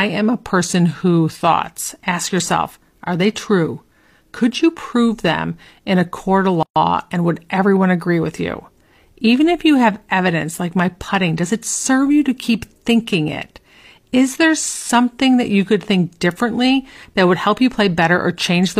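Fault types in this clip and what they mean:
Gap at a join of encoded pieces: the speech was encoded in separate pieces and spliced back together without trimming each encoder's start-up delay and final-frame padding, so that padding survives as silence at the join. At 6.63 s, just after "in a court of", the speech cuts out for about 131 ms with smeared edges, then resumes exactly where it stopped with "and would everyone agree".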